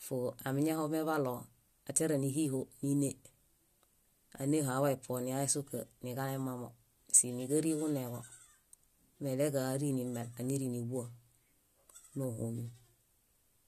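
Just recorded speech here, and nothing technically wrong turns up anywhere in it.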